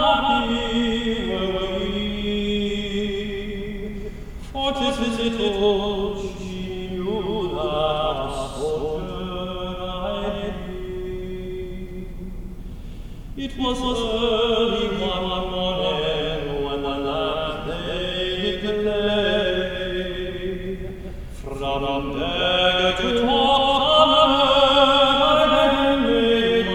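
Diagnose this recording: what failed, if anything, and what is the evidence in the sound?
Throughout the clip every event is heard twice: a second, full-band copy follows roughly a fifth of a second behind the first at about the same loudness. This is a doubled audio track, most likely from the same signal reaching the mix by two capture or routing paths, one slower than the other. It differs from acoustic echo or reverb because the copy keeps its full brightness, has no decaying tail or room colour, and repeats only once.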